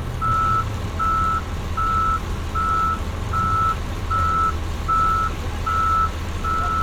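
Nothing in these everyday sounds trips the ear as a fault; there's simply nothing here to flag.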